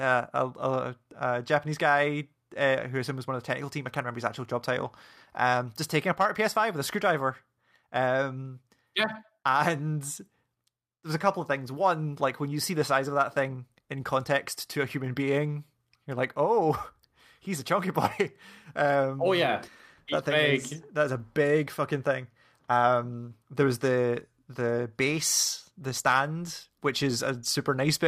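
Listening to this speech recording, nothing stood out as a technical problem at any point.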